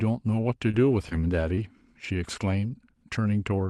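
Around 0.71 to 0.75 s, 1.09 to 1.13 s and 1.55 to 1.59 s there's short concealed packet loss. About 20 ms of audio never reached the decoder in time, and the receiver stretched the preceding sound to cover it before blending back. You hear a quick smear or wobble, and a brief consonant can get swallowed.

Lost packets rebuilt from error correction show up at 0.73 to 0.75 s, 0.91 to 0.93 s, 1.05 to 1.07 s, 1.11 to 1.13 s and 1.57 to 1.59 s, each about 20 ms long. There's no gap at those points, because the next packet carried a low-bitrate backup copy that the decoder played instead. Those frames come out rougher and grainier than the surrounding audio, which is Opus with a top end stopping near 12 kHz, consistent with roughly 32 kbps.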